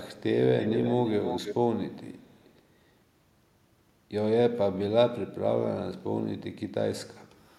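Echo leak at 0.59–1.55 s and 2.15–2.52 s: a copy of the speech returns 323 ms late, about 10 dB down, then very faint, likely from a loudspeaker's incompletely cancelled echo.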